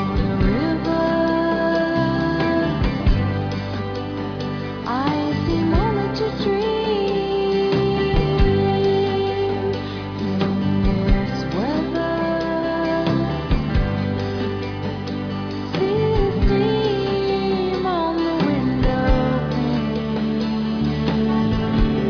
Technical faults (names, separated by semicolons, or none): none